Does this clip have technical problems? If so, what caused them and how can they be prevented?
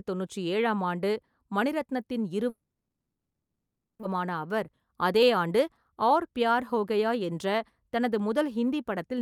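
Yes. Long network dropout, 2.49 to 4.05 s, just after "தொண்ணூற்று ஏழாம் ஆண்டு மணிரத்னத்தின்": the last sound trails off as a fading buzz, then about 1.15 s of silence, and roughly 1.4 s of speech never returns, likely from stalled packet delivery. Redundancy such as forward error correction or a more reliable connection prevents this.

Jitter buffer speed-up, 4.72 to 5.51 s: the receiver had more audio queued than it wanted and trimmed short pitch-period slices, about 70 ms in all. Speech runs at 107% speed with unchanged pitch and sounds hurried. Steadier packet timing keeps the buffer from overfilling.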